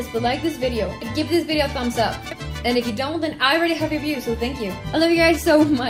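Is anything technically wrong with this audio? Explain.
No, the signal shows no technical faults from beginning to end.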